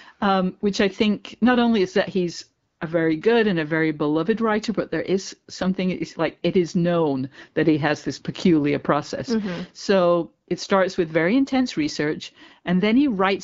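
From 2.67 to 2.79 s, between "only is that he's" and "a very good and", the real background drops out for about 120 ms and a smooth, even hiss takes its place. This is AMR comfort noise: the phone treated that moment as silence and sent no speech frames, so the receiver synthesised filler noise from a rough level-and-spectrum estimate. Around it, the HD Voice coding sounds clear, which fits AMR-WB at 12.65 kbit/s.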